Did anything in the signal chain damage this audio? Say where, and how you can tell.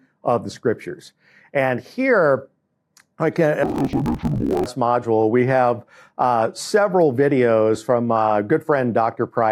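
Yes. The damage sits at the sample-format conversion stage, where interleaved audio was read as planar. From 3.63 s to 4.66 s the sound drops a full octave, about 12 semitones. It turns doubled and choppy. The blocks repeat every 21.33 ms, 46.9 times a second, which fits a 1024-sample block. Each block held alternating left and right samples, but its first half was read as left and its second half as right. Both halves then played at half speed, so the pace held while the pitch fell.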